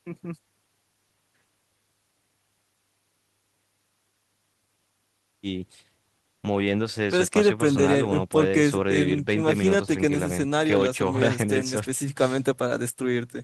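A spoken recording in which nothing technical stood out on listening.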